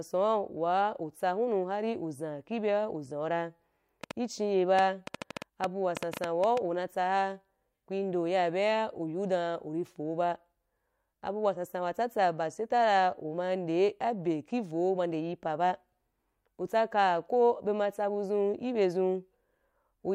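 A train of clicks ticks over this speech recording from 4.04 to 6.58 s, just after "uzan ibye uzan ra": around fifteen similar pops at about 6.3 per second, unevenly spaced and poking roughly 15 dB above the signal. Likely cause: interference from nearby equipment or a faulty connection or power supply.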